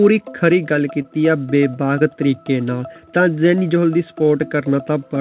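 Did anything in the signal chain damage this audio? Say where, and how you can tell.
Yes. At 1.02 to 1.06 s there is a brief smear where about 20 ms of audio is missing. This is short concealed packet loss on the network: a packet arrived too late, so the receiver extended the preceding sound for roughly 21 ms and then blended back into the real signal.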